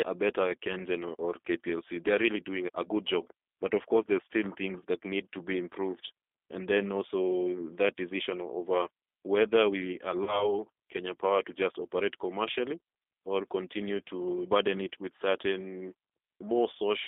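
The whole recording has passed through the G.729 codec. Its character fits the 8 kbit/s G.729A variant, which rebuilds the speech from a vocal tract filter, a pitch predictor and a few pulses per frame rather than keeping the waveform itself. The line band runs from 300 Hz to 3.5 kHz, so the voice sounds thin and boxed in. The coding damage is plainly audible: the speech carries a rough, slightly synthetic texture throughout.

From 10.24 to 10.54 s, just after "decision over whether we", VoIP packet loss was concealed by the speech codec. The gap fits about 30 ms of missing audio, around three 10 ms frames. The decoder filled it by extending its last pitch and filter while turning the gain down, so the sound smears into a fading buzzy tone or coloured noise. Because each frame is predicted from the one before, the voice stays weak and distorted for a while after real packets resume.

The same concealment recurs from 14.86 to 14.88 s, between "or continue to burden" and "with certain". 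This loss fits a single 10 ms frame. It is heard as a brief smear joining the two phrases.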